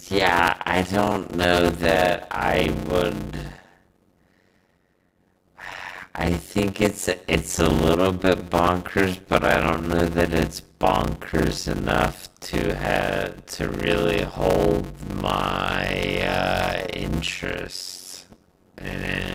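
Speech throughout carries a block size mismatch (padded): zero-filled gaps after each 256-sample write cause a steady 91.9 Hz buzz and slow delivery to 0.533 speed, with timbre unchanged, unlike resampling errors.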